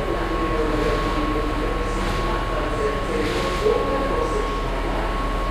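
No technical faults can be heard anywhere in the sound, which keeps an intact signal throughout.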